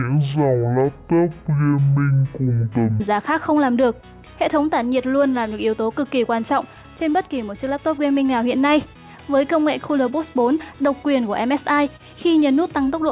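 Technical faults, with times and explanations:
0.0 to 3.0 s, wrong sample rate: The opening three seconds play at half speed and a full octave low, 12 semitones down. Everything drags and sounds deep and sluggish. The samples are being read out at half the rate they were captured at, with no conversion between the two. Because time and pitch are tied to that rate, both drop together by the same factor. This fits audio recorded at 16 kHz but played back at 8 kHz.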